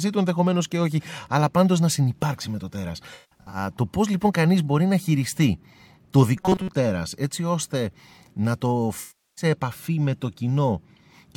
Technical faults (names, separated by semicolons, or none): AAC frame loss with concealment; robotic sound from repeated short buffers